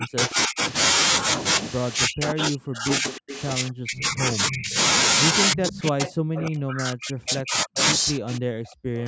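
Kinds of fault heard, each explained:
Speech suppressed in double talk: The speech repeatedly sinks or breaks up in pieces, with the deepest dips around 40 dB down, at 0.0–0.6 s, 2.06–4.77 s and 5.53–9.06 s. The likely cause is an echo canceller that, with both sides talking at once, could not tell the near talker from loudspeaker echo and attenuated everything. The gaps are brief at the start but grow to cover much of the final three and a half seconds.
Echo leak: A faint delayed copy of the speech trails the original by 307 ms at about 15 dB below it, heard at 3.08–3.42 s, 5.53–6.42 s and 7.30–7.83 s. It likely comes from the far end playing the call over a loudspeaker, where its echo canceller let part of the microphone pickup through and returned it. The copy overlaps the suppressed passages.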